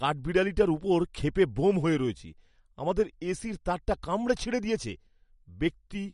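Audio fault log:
Throughout, MP3 compression: the speech has a watery, swirling quality and nothing above 11.2 kHz, the sign of a hard treble cut-off rather than a gentle low-pass roll-off. Weak spectral detail flickers between frames, which likely comes from encoding at a low bitrate around 48 kbps.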